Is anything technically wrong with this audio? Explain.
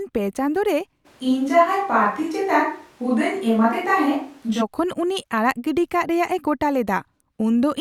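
Yes. A switch to a distant microphone runs from 1.07 to 4.60 s, after "ᱯᱮ ᱪᱟᱸᱫᱳ ᱨᱮ" and before "ᱩᱱᱤ ᱟᱲᱟᱜ ᱜᱤᱰᱤ ᱠᱟᱜ". The close microphone likely dropped out, leaving a farther pickup. The voice turns abruptly roomy, hollow and bass-light, with little level change and room noise about 35 dB below the speech.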